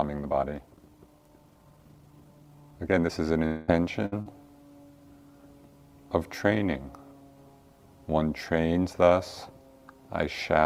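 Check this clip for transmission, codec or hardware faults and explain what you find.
There are four faults, all bunched into the first four and a bit seconds, and three of them look like network trouble.

From 0 to 3.12 s there's a time-stretched section, sped up to about 1.52 times normal pace. Pitch stays put, which points to software squeezing the audio to fit a shorter length, likely by dropping tiny slices rather than just playing it faster. You hear it as a rushed, hurried delivery, and the pace snaps back to normal right after.

From 3.45 to 3.70 s there's what sounds like a long network dropout, with roughly 220 ms of audio missing, likely because nothing arrived in that window. The receiver never went fully silent. It kept extending the last sound the whole way as a buzzy, hissy tail that fades, and when the real audio returns it has jumped ahead, skipping whatever was in that gap.

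At 4.06 to 4.14 s you get a burst of packet loss, about 60 ms gone. Several packets in a row showed up late or not at all, so the decoder held onto the last sound and let it fade. It comes across as a short held buzz or hiss, and then the audio picks up further along with that chunk cut out.

Right after, at 4.22 to 4.28 s, there's short concealed packet loss covering about 40 ms. The decoder patched the hole by carrying the previous sound forward and blending back into the real signal. It's a quick smear or wobble.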